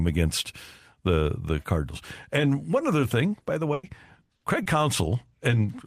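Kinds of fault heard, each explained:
Short concealed packet loss: 20 to 40 ms of audio arrived too late, and the decoder bridged each gap by extending the preceding sound. This gives brief smears or wobbles after "one other thing" at 3.39 and 3.43 s, then at 4.25 and 4.63 s.
Burst of packet loss: a longer run of lost audio, 100 ms at 3.73 s just after "other thing by the" and 60 ms at 4.35 s. The last sound is held and fades as a buzz or hiss, and the speech then resumes with a chunk missing.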